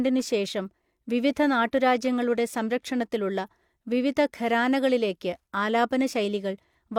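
Nothing in the recording trips up the ear, and there's no technical fault anywhere in the speech to point to.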